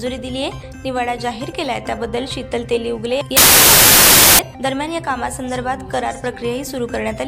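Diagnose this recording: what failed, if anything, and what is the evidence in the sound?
A sample-format conversion fault, specifically a wrong sample width, occupies 3.37 to 4.39 s. Over that second the sound collapses into loud, harsh noise with the original only faintly audible underneath, and what survives runs fast and high, about 1.33 times normal speed. That ratio is the giveaway: packed 24-bit data read as 32-bit integers consumes four bytes per sample where three were written, so most values straddle sample boundaries and only some retain the true top bits.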